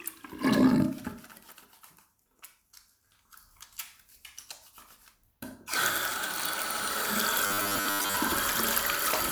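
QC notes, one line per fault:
7.46–8.16 s, robotic sound from repeated short buffers: for 0.7 s the sound hardens into a rigid metallic buzz at 100 Hz. The likely cause is input arriving too seldom, with playback looping a 10 ms chunk for most of the stretch while the real signal is skipped.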